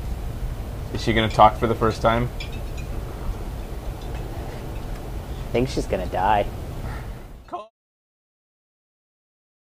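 No technical faults can be heard in the signal, and the smooth fade-out that begins around six and a half seconds and reaches silence at 7.71 s is a deliberate, even editorial fade with no click or hard edge.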